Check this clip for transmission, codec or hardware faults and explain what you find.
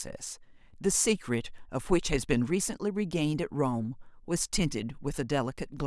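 No transmission, codec or hardware faults.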